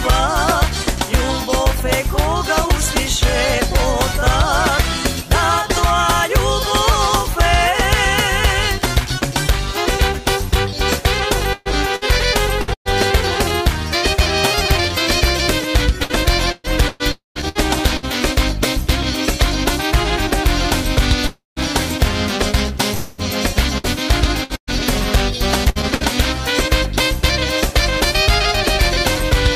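Repeated packet loss (robotic sound) first appears from 11.53 to 12.95 s. Six short holes, the longest about 120 ms, are each filled by stretching the preceding sound, and the next hole follows before the audio settles. About a quarter of that span is patched material, so the sound turns choppy with fragments missing. The same pattern returns from 16.04 to 18.06 s with seven gaps, about a fifth of the span concealed.

Inside that second stretch, at 17.12 to 17.38 s, comes a long network dropout. The sound is carried on as a fading buzz for roughly a tenth of a second and then falls to silence for about 150 ms. The audio resumes with that portion absent. The likely cause is a run of packets that never arrived. Another dropout at 21.27 to 21.59 s behaves the same way, also ending in about 150 ms of silence. A third, at 22.94 to 23.21 s, is covered entirely by the fading continuation and never reaches silence.

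Repeated packet loss then returns from 23.78 to 26.03 s. Seven gaps, the longest about 118 ms, leave about a sixth of the span concealed, and the same clipped, robotic texture comes back.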